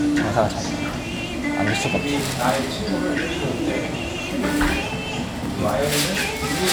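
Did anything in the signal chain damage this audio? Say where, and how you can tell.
Yes. A single sharp loud pop at 5.46 to 5.48 s, a few dB above the surrounding sound, points to a likely voltage spike in the analogue wiring or a switch.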